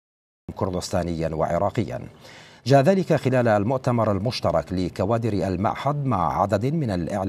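From 0 to 0.49 s there is digital silence, and at 0.49 s the sound jumps in already under way: a cut-off start. Capture began late, so the first event lacks its attack. A fade-in would rise gradually; this arrives abruptly at full level.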